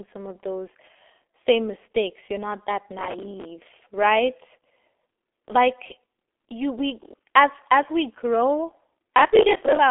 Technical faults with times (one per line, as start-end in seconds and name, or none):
0.00-9.90 G.723.1 codec